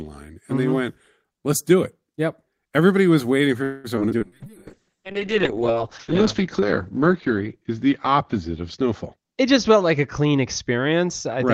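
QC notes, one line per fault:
3.63–3.87 s, call audio freeze: just after "was waiting" the sound stalls for about 0.21 s, the last sound drawn out as a fading buzz or hiss. This is likely packets arriving late and the jitter buffer running dry. Nothing is lost. A spectrogram shows smeared, decaying harmonics.
3.96–4.00 s, short concealed packet loss: about 40 ms of audio never arrived in time, and only a brief synthetic patch covers the hole. It is heard as a quick smear or wobble. A waveform shows a short, oddly smooth segment with a soft join back into real signal.
4.09–4.13 s and 4.18–4.23 s, skip ahead: playback jumps forward twice, each time dropping roughly 70 ms while later audio was already queued, so sound is clipped out with barely a gap. A waveform shows abrupt splices where the two sides meet nearly directly.
4.24 s to the end, call bitrate drop: the encoder rate falls from 32 to 6 kbps, staying at the bottom for about 1.5 s, and the bandwidth shrinks from 20 kHz to 8 kHz. 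The sound turns muffled and rough. A spectrogram shows everything above 8 kHz suddenly gone.
4.47–6.67 s, jitter buffer slow-down: the receiver repeated tiny pitch-period slices to rebuild its reserve, adding about 164 ms. The sound runs at about 93% speed without a pitch change, drawn out. A spectrogram shows stretched but level harmonics.
9.05–10.94 s, jitter buffer speed-up: to shed excess buffered delay the receiver cut out short pitch-period pieces, about 0.2 s in total. The sound plays at about 111% speed with unchanged pitch and feels hurried. A spectrogram shows compressed syllable timing with harmonics at normal frequencies.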